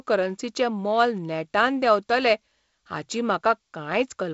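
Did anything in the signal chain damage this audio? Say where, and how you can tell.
No, the signal chain shows no damage: the audio carries the band-limited character of G.722 wideband telephone coding, with nothing above about 7.7 kHz and the faint upper-band hiss and slightly grainier low band that point to its lower bitrate mode, which is that codec working as designed.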